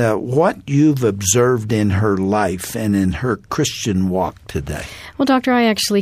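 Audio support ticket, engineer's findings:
No audible faults found; level, continuity and frequency content stay stable across the whole signal, with nothing pointing to a capture, transmission or playback problem.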